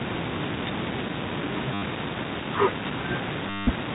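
At 1.74 s the sound stutters for 80 ms, and again from 3.50 to 3.67 s for 170 ms: packet loss with the last packet repeated. The receiver kept replaying its latest packet until fresh data arrived, and the timing points to 10 ms packets, so each run buzzes robotically at about 100 Hz. A waveform shows one short segment copied end to end. A spectrogram shows evenly spaced vertical lines over smeared, frozen bands, all cut off at 4 kHz by the telephone coding.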